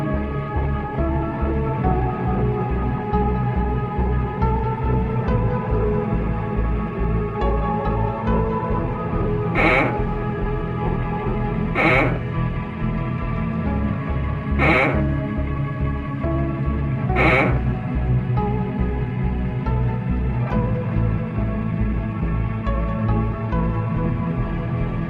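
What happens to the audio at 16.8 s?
Nothing goes wrong at 16.8 s; the audio plays through that moment intact, with no dropout, click or distortion.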